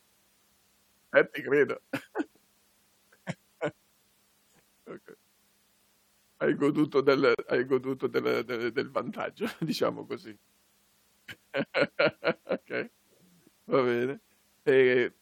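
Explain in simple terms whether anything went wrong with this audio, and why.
Yes, one thing went wrong. At 7.35 s the speech drops out for about 38 milliseconds, until 7.39 s, just before "hai goduto del del". This is a gap at a join of encoded pieces. The recording was likely compressed in separate chunks and then stuck together without trimming. Each chunk carries a sliver of silence at its edges, and that silence stayed in. The cut sounds abrupt, slightly softened, and then the speech simply carries on.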